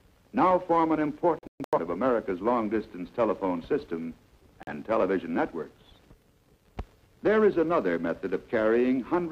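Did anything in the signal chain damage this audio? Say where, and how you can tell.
Yes, there's a digital broadcast dropout, so the damage happened on reception. From 1.39 to 1.79 s the sound keeps falling into short muted holes, about 256 ms missing across roughly 341 ms, the longest gap 128 ms. At 4.63 s there's a single hole of about 43 ms. Those chunk sizes fit frames of around 43 ms that failed and were muted until clean ones arrived, and whatever was sent in those gaps is gone.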